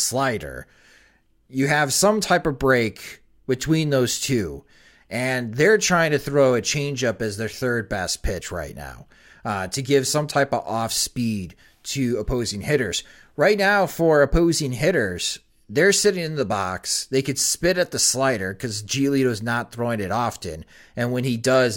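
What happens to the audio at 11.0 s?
Nothing goes wrong at 11.0 s; the speech continues there without any audible fault or interruption.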